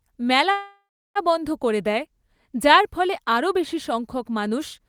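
Call audio freeze from 0.51 to 1.18 s: the last sound stretches into a fading buzz, then about 330 ms of silence, before resuming intact at "বন্ধ করে দেয় যার". Likely late packets draining the jitter buffer, inserting a 640 ms gap with nothing lost.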